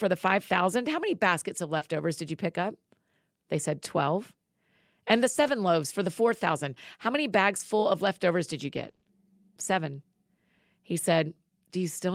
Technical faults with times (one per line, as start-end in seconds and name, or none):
1.77-1.83 short concealed packet loss
1.81-1.83 lost packet rebuilt from error correction
5.43-5.49 lost packet rebuilt from error correction
8.75-9.07 repeated packet loss (robotic sound)